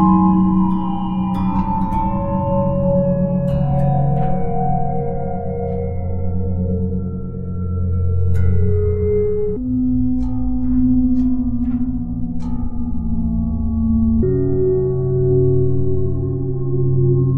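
From 9.57 to 14.23 s, a section at the wrong speed plays at 0.604x, about ten semitones deep, likely from a clock mismatch. The spectrogram shows energy shifted downward and stretched.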